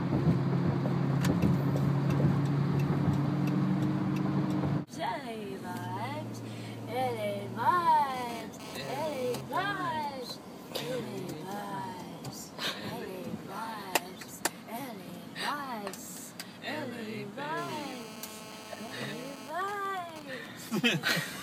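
A GSM phone buzz appears from 8.10 to 9.41 s and again from 17.57 to 19.49 s. A nearby 2G phone transmits in bursts at 217 Hz, and the audio circuit rectifies them. The result is a hard, raspy buzz rich in harmonics, about 15 dB below the sound. In the first stretch the buzz comes and goes, as during a data transfer. In the second it holds steady, as during a call.

From 19.49 to 20.46 s, GSM signalling bursts follow directly. The phone now sends only short groups of bursts, as when its user falls silent in a call. The buzz breaks into even ticks with a longer 217 Hz buzz twice a second, at a similarly low level.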